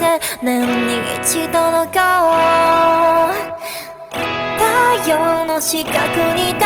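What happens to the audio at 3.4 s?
At 3.4 s the audio is in a degraded stretch that begins abruptly at 2.65 s and runs to the end of the clip. Coding artefacts are more prominent, with no gap at the switch. This is an adaptive stream at a lower bitrate: a slowed connection made the player swap to a leaner encoding, which fits a drop from about 64 to 16 kbit/s Opus.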